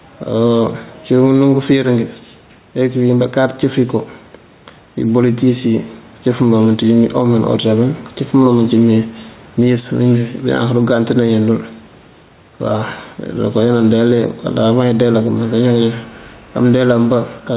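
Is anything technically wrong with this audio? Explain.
Yes. Gain pumping runs throughout the clip, with the level moving by roughly 5 dB. The likely cause is input gain set far too high for the microphone, with a fast limiter or compressor pulling it down on every loud syllable and releasing it in the gaps. The room noise sits about 33 dB below the speech, and the speech sounds squashed.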